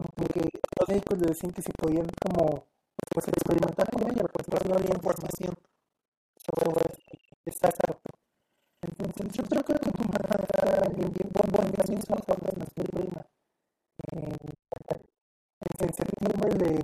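From start to finish the speech carries buffer tearing: a steady robotic rattle at about 23.4 Hz that is present only while sound is present. The writer and the reading hardware have slipped, so most of each buffer, roughly two thirds or more, replays audio from about 150 ms earlier, with a buffer of 2048 samples. On a spectrogram this shows as evenly spaced vertical lines about 43 ms apart. The waveform jumps abruptly at each join.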